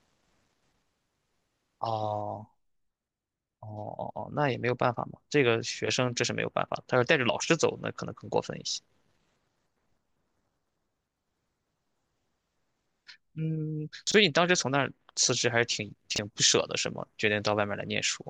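A 23.22 ms chunk of this speech plays two chunks late at 14.07–14.14 s and again at 16.12–16.18 s: chunks out of order, each a brief jumbled stutter.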